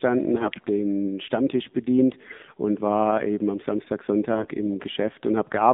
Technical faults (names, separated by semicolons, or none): AMR narrowband mobile codec; AMR bit errors